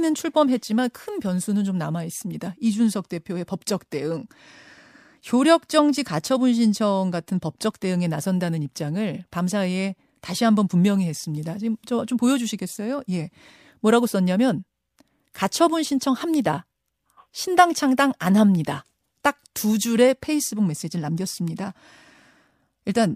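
Nothing stood out as a technical problem on listening to the speech in this recording.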